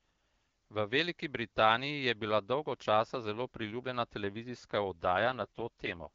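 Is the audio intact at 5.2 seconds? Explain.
No. At 5.18 s an AMR rate drop begins and lasts until 6.10 s. The AMR-WB (HD Voice) codec is pushed from 12.65 down to 6.6 kbit/s, trading speech bits for error protection, so the speech turns rough and synthetic, with no gap and no change in bandwidth.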